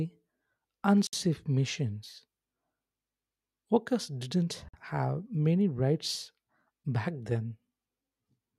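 At 1.07 and 4.69 s, gaps at joins of encoded pieces cut silences of about 60 and 50 ms from encoder delay and padding. Unlike dropouts, the speech resumes exactly where it stopped.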